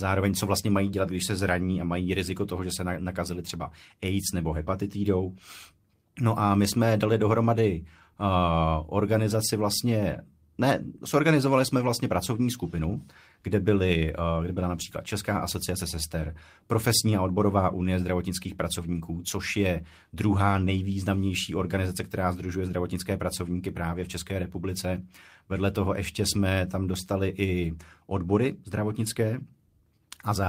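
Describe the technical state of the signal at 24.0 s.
Right after "která združuje zdravotnické pracovníky", from 23.97 to 24.03 s, the speech turns briefly rougher and noisier with no dropout or silence. This is a lost packet rebuilt from error correction. Packets went missing, but each following packet carried a low-bitrate backup copy, and the decoder played that copy in place of the original. The rebuilt stretch is about 40 ms, which fits two lost packets, and it sounds coarser than the surrounding audio.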